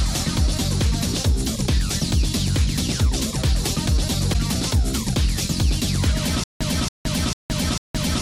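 At 4.33 to 4.36 s the audio skips ahead with a brief glitch, likely a broken MP3 bit reservoir: a frame looks back for borrowed bits that belonged to a cut-away 26 ms frame. From 6.44 s to the end there's a stutter with silent gaps: the same 278 ms fragment plays four times, separated by about 169 ms of dead silence every 447 ms, likely a stalled stream replaying its last buffer.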